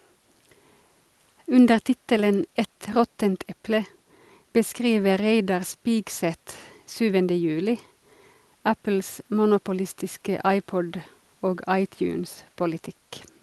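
No technical faults can be heard at any point in the speech, so there is nothing to describe in time order.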